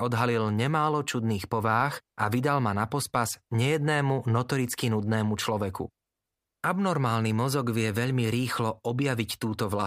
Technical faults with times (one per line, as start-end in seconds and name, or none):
none